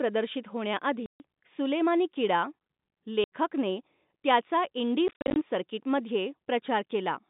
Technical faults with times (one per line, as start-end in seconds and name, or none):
1.06-1.20 packet loss filled with silence
3.24-3.30 packet loss filled with silence
5.08-5.36 packet loss filled with silence